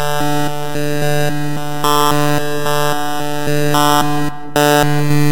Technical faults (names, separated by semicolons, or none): none